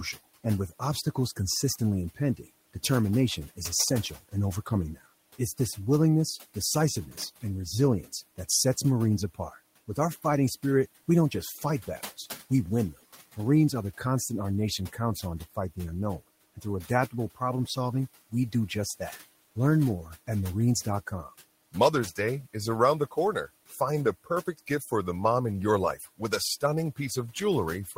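Near the end, between 24.46 and 24.92 s and again between 25.97 and 26.2 s, stretches of speech turn faint and swallowed, with only brief moments, roughly a tenth of a second in each, dipping by about 10 dB and about 11 dB. This is speech cut by the noise suppressor: it mistook quiet parts of the speech for the room noise that sits about 22 dB beneath it, and turned them down.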